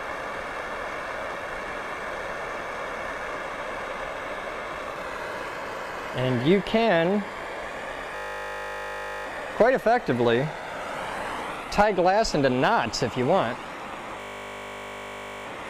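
A system hang loop freezes the audio from 8.16 to 9.26 s and again from 14.2 to 15.46 s. The hardware kept replaying one 20 ms stretch of its ring buffer while the system stalled, producing a steady 50 Hz buzz.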